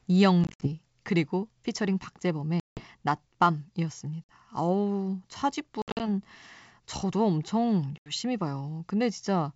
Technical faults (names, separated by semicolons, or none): packet loss on an ADPCM call